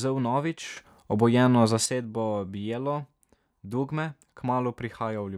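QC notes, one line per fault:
0.77–1.86 s, sudden gain jump: the speech level steps up by about 8 dB with no fade-in, holds at that higher level for roughly 1.1 s, then drops back just as abruptly. The background noise rises and falls in step with the speech, which points to a gain change applied to the whole signal rather than a louder talker. The likely cause is a digital gain setting or bit shift switched between adjacent samples without any ramp.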